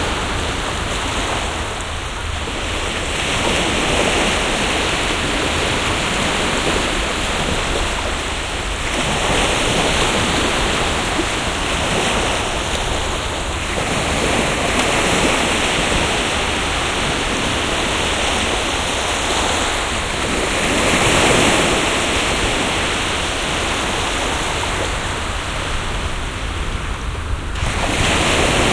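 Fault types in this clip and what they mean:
Nothing in the audio stood out as a problem on listening.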